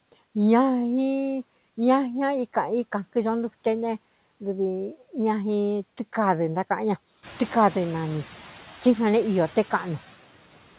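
A noise suppressor is at work for the whole recording, estimating the steady background and pulling those bands down by about 11 dB frame by frame. The background therefore dips in the gaps between phrases and swells back under the speech. This is easiest to hear from around 7 s, when the room noise climbs by about 15 dB yet still sits about 19 dB below the speech. Throughout, the audio stops at 4 kHz, consistent with a G.711 call path.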